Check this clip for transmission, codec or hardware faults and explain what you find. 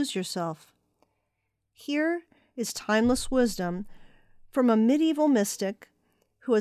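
Gave this speech recording a careful listen and there's nothing amiss to report.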